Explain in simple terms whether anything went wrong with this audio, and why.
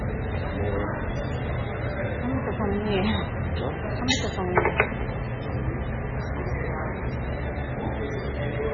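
Something did go wrong, and it runs through the whole clip: it sounds like heavy MP3 compression, most likely from squeezing the file down too far. Everything above about 7.1 kHz is simply gone, so the sound comes across dull and boxed-in. The encoder was short on data, so quieter detail flickers in and out from moment to moment, giving a watery, swirly texture, with metallic chirps on bright hissy bits and smeared-out sharp hits.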